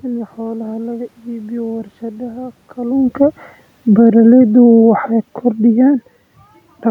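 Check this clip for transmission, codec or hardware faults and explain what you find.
One hardware-side fault turns up: the automatic gain falling. From 2.78 to 5.04 s the AGC decides the input is too loud or its background noise too strong and pulls its gain down by about 5 dB. The voice and the room noise behind it sink together, which is how you tell it apart from the talker shifting position around 3 seconds.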